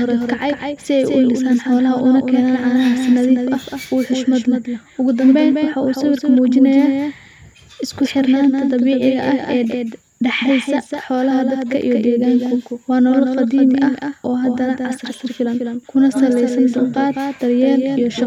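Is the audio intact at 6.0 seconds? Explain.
No. At 6.0 seconds the speech is heard twice, as it is throughout the clip. This is a doubled audio track. A full-band copy trails about a fifth of a second behind, a few decibels quieter, with no room colour. It is likely a second, slower capture path.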